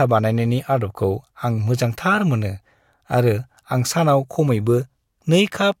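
Nothing goes wrong anywhere in this bit of speech, so there's no technical fault to walk through here.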